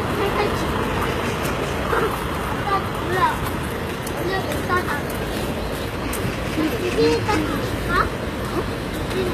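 Throughout the clip the upper range carries a gritty, metallic sheen. Bright transients and hiss-like detail sound synthetic rather than dull, and nothing survives above about 14.9 kHz. The damage is plainly audible and points to a very low bitrate, around 20 kbps. The likely cause is HE-AAC compression, where spectral band replication rebuilds the treble from copied lower bands. That is why it stays bright but grainy, unlike a plain low-bitrate lowpass, which just sounds muffled.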